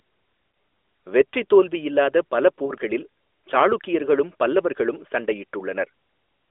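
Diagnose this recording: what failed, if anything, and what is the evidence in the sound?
Network stage: we've got lost AMR speech frames, a single frame each time, at 0.52 to 0.54 s and 2.66 to 2.72 s, heard as a quick dip or warble. The decoder covered each gap by reusing the previous frame's pitch and vocal tract settings with the gain pulled down. The narrowband 300 Hz to 3.5 kHz codec sound around these dips is as you'd expect.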